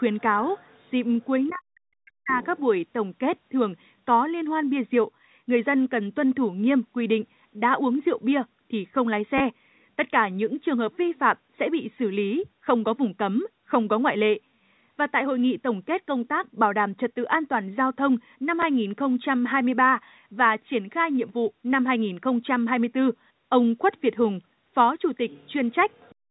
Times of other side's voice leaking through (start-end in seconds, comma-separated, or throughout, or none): 0.18-0.91, 1.46-1.54, 2.43-2.60, 25.30-25.53, 25.91-26.12